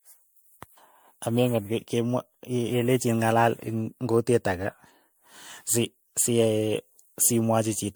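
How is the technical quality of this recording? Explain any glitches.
The recording has one fault that runs through the whole clip: generation loss. The speech sounds swirly and hollow, with a smeared, watery texture, and consonant attacks are blurred rather than crisp. The likely cause is repeated lossy encoding, roughly seven passes through an MP3 codec at settings that point to about 100 kbit/s. Each decode and re-encode quantises the signal again on a shifted frame grid, so noise and spectral gaps accumulate beyond what that bitrate alone would produce. The top end still extends to about 20.1 kHz.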